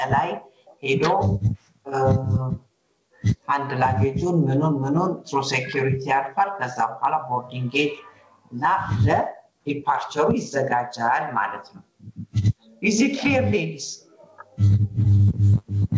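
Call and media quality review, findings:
Gain pumping, throughout. Level swings by around 15 dB, pulled down under each loud onset; dynamics squashed. Likely input gain far too high, with a fast limiter clamping every peak. Waveform shows a flat-topped envelope. Spectrogram shows content cut off at 8 kHz by the call codec.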